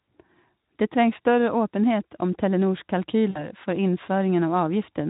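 At 3.29 s, VoIP packet loss concealed by the speech codec takes over until about 3.51 s. Roughly 60 ms of packets went missing, and the decoder filled the gap by stretching its last pitch and spectral shape while lowering the level. This turns the speech into a buzzy or noisy continuation that fades. Unlike a clean dropout, there is no silent hole. Unlike a plain click or glitch, the colouring lingers past 3.5 s as the decoder's state recovers. The Speex coding throughout the clip is light.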